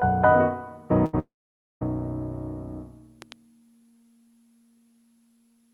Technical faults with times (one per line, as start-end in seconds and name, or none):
1.05-1.15 burst of packet loss
1.19-1.83 long network dropout
3.22-3.34 loud pop